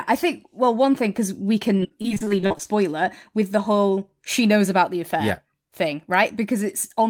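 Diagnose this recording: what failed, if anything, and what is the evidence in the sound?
From 1.77 to 2.67 s, between "one thing because we" and "it with the whole", the speech turns choppy, with small pieces missing. This is repeated packet loss at the network stage: a run of 14 short gaps, none longer than 36 ms, each patched by stretching the previous sound forward. The concealment covers roughly a third of that stretch, so the repeated fills produce the choppy texture.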